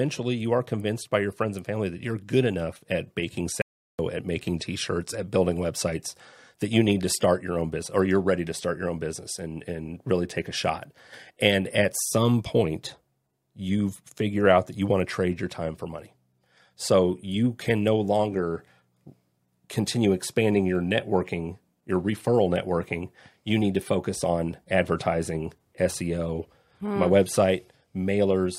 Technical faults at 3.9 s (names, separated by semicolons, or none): audio dropout to silence